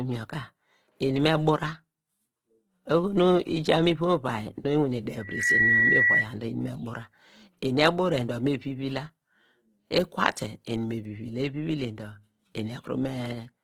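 Speech recording with plainly audible coding damage throughout: the voice has a rough, grainy, noisy texture while keeping full bandwidth. This points to likely Opus compression in its music (CELT) mode at a low rate, which fits around 16 kbps. Band energies are preserved but filled with folded or noise content. From 5.19 s to 6.28 s a loudspeaker feedback squeal appears as a single 1.9 kHz tone. It builds in about a third of a second to about 5 dB above the speech, then stops.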